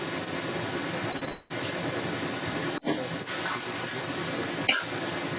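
From the very start, at 0.00 s, and for the whole clip, a second copy of the speech trails the first by about 0.26 s, and it sits roughly 10 dB quieter than the direct speech. This is an echo leak: the far end was likely playing the call on a loudspeaker, and its echo canceller let the microphone's pickup of that playback slip through and return down the line.

At 1.12 to 1.16 s, 1.18 to 1.23 s and 1.25 to 1.29 s the speech briefly smears and wobbles three times in quick succession. These are short concealed packet losses. Gaps of about 20, 40 and 20 ms never reached the decoder, and the receiver papered over each one by extending the preceding sound before blending back into the real audio.

Straight after, from 1.29 to 1.52 s, the sound turns into a continued stretch of about 0.2 s that never drops to silence before the speech picks up again further on, with that portion gone. This fits a long network dropout, where likely nothing arrived for that stretch and the receiver kept extending the last sound to fill it. 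Throughout, the telephone-band G.711 path leaves nothing above 4 kHz.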